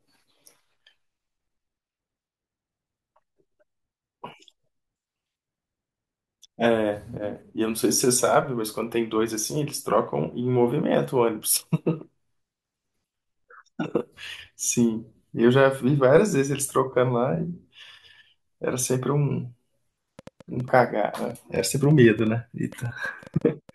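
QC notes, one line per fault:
20.19–23.70 s, train of clicks: a burst of roughly thirty sharp ticks, about 6.85 per second but unevenly spaced, peaking around the level of the speech itself and audible in the gaps too. Likely interference from nearby gear or a faulty connection or power supply.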